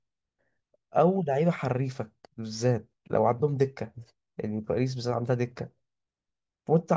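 Speech, with nothing technically wrong to report.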